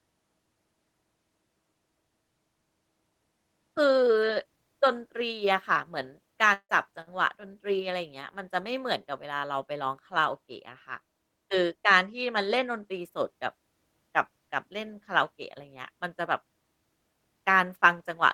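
At about 6.53 s the speech breaks off, and the last bit of sound is stretched into a fading buzz for roughly 160 ms before briefly going silent. At 6.71 s it resumes with a chunk missing, likely a long network dropout.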